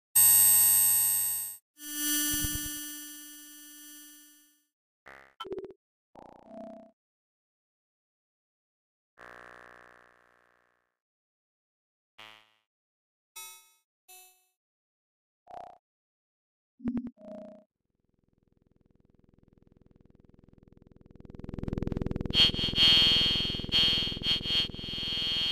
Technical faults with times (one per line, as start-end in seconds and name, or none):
2.36-3.76 zipper noise
21.04-21.72 zipper noise